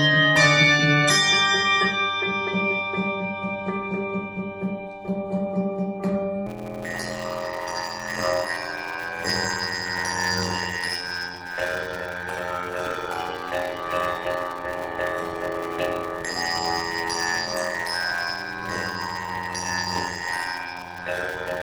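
From 6.46 s to the end at 21.62 s there is a block size mismatch (padded). One stage hands over shorter blocks than the next stage reads, and each block is padded out with silence, which fits a 512-sample read block. The regular gaps buzz at 86.1 Hz, and the audio drags at 0.625 times its normal speed while keeping about its normal pitch. A sample-rate error would shift pitch along with speed, and underrun dropouts would fall irregularly rather than at a steady rate.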